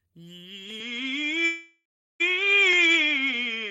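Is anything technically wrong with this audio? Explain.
Yes. An input switched to a poorer device from 0.80 s to the end: the music abruptly loses everything above 7.6 kHz, shifts by around 5 dB and gains a background noise about 40 dB down, with no silence at the change. This sounds like a likely move to a narrower-band microphone or headset.

A call audio freeze runs from 1.45 to 2.22 s. The music stalls into a fading continuation that drops to silence for 350 ms. It then resumes where it stopped, 745 ms late with nothing lost, likely because delayed packets emptied the jitter buffer.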